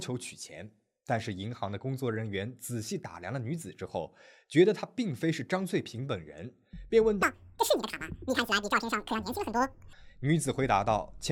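Speech clip, and from about 7.23 s to 9.93 s it jumps to double speed and an octave higher, a 12-semitone shift. That's audio read two samples at a time. The reader grabs sample pairs as single frames, as if mono were stereo, so playback doubles in speed.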